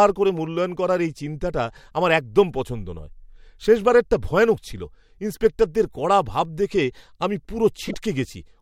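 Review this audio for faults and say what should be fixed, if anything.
Corrupt frame decoded at 7.86 to 7.94 s: a short chirp, squeak or burst of noise, peaking near about -10 dBFS, cuts across the speech for about 80 ms, which fits roughly three damaged frames. Flipped bits gave the decoder wrong gains and codes, so it placed energy at false frequencies. Adding checksums so the decoder conceals damaged frames instead of playing them would prevent this.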